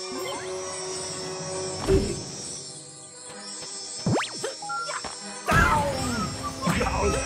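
Nothing in this audio stands out as a technical fault. No interruption, distortion or other defect can be heard anywhere in the sound.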